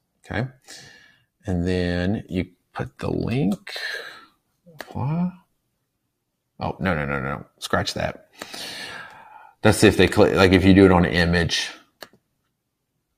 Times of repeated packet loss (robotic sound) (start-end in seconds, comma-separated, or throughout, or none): none